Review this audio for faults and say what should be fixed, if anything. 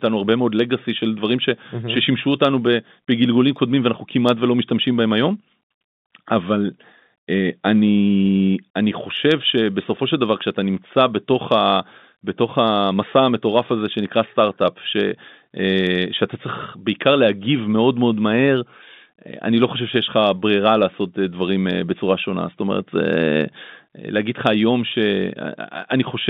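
No faults; nothing needs fixing.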